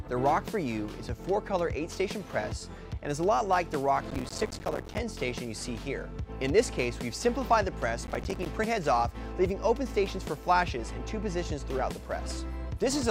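Processor overload crackle at 4.11 to 4.98 s and 8.02 to 8.46 s: the processor misses many short buffer deadlines in a row, each leaving a silent gap, heard as gritty tearing.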